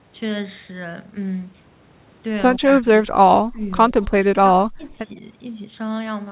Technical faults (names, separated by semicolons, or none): speech suppressed in double talk